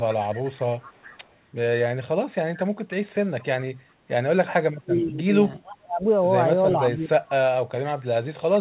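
A faint, delayed copy of the speech trails the talker at 0.80–1.36 s, 4.99–5.04 s, 5.63–5.75 s and 6.69–6.73 s, about 415 ms late and roughly 15 to 30 dB below the direct sound. This echo leak likely comes from a far-end loudspeaker whose echo canceller let its microphone's pickup return. In this speech recording the talker's own level also collapses at 4.59–5.33 s, 5.80–6.04 s and 6.85–7.21 s, dropping by as much as about 35 dB. That is speech suppressed in double talk: with both sides talking at once, the canceller likely could not separate the two and turned both down.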